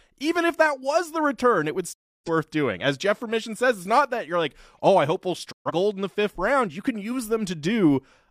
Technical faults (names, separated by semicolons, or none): digital broadcast dropout